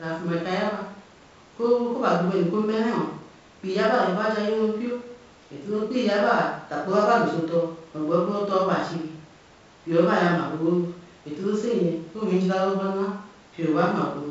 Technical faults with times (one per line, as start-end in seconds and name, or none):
none